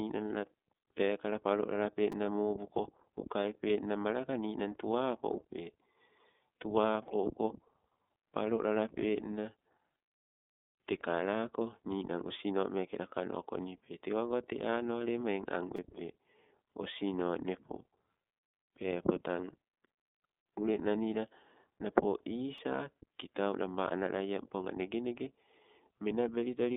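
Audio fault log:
Throughout, iLBC codec: speech band-limited to 0.2–3.6 kHz with nothing above 3.8 kHz, giving a flat spectrogram ceiling; 30 ms frame-by-frame coding at 13.33 kbps sounds plainly rough and synthetic.
2.12 s (after "la pekala palolale"), 15.76–15.78 s, 22.58 s, repeated buffer: tiny segments replayed with hard joins, which fits a roughly 5 ms buffer. They are heard as clicks or brief buzz and seen as repeating waveform blocks.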